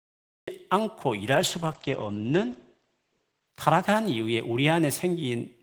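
Cut-off start, 0 to 0.48 s: the speech opens on digital silence and then cuts in abruptly at 0.48 s, partway into a sound, with no natural onset. This happens when the recording or stream begins late and catches the audio mid-utterance.

Call bitrate drop, 1.33 to 4.81 s: the speech turns coarse and watery, and the top end narrows from 20 kHz to 8 kHz, which fits the encoder being pushed from about 32 kbps down to 12 kbps. It stays at its roughest for about 1.9 s before recovering.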